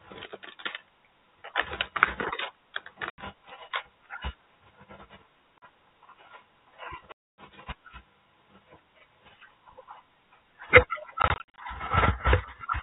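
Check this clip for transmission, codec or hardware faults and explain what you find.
One fault appears: packet loss filled with silence. Lost packets were replaced by silence, punching holes in the speech in steps that fit 20 ms packets, each with a hard edge. This happens at 3.10 to 3.18 s (80 ms), at 5.58 to 5.62 s (40 ms), at 7.12 to 7.37 s (a 260 ms dropout), and at 11.22 to 11.58 s, where short gaps of up to 40 ms are scattered across 360 ms.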